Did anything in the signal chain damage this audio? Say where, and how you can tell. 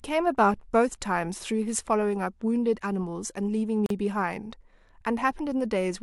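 Yes, there's a gap at a join of encoded pieces in the speech, a roughly 41 ms dropout from 3.86 to 3.90 s. The edges are smeared by the codec, and the sound resumes right where it stopped. It's codec-stage: separately encoded chunks, about 4 s each, were butted together with their start delay and end padding left untrimmed.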